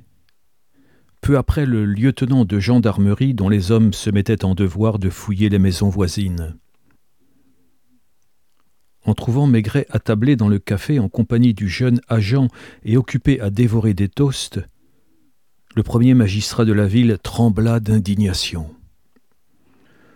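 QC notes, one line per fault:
No technical fault can be heard anywhere in the clip. There is nothing in the sound that calls for a note at any point.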